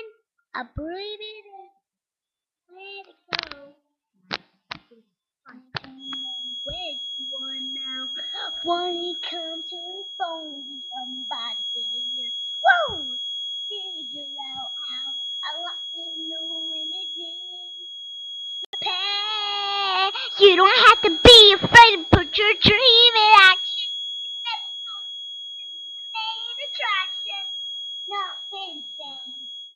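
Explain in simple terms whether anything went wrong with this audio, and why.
From 5.96 s to the end, a thin, steady whistle at about 3.3 kHz sits well below the main sound. This is a feedback whistle, likely from a loudspeaker-to-microphone loop held just at the edge of feedback. It swells and fades slowly in level but never swells into a runaway howl.

At 18.65 s the sound cuts out completely for 84 ms, then carries on. This is a Bluetooth stall, likely caused by the wireless link briefly running out of audio. It is a clean gap of silence, not a crackle or a dip in volume.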